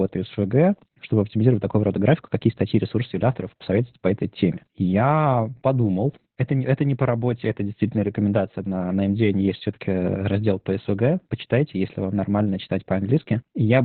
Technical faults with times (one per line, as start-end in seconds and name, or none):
0.00-13.84 Opus voice compression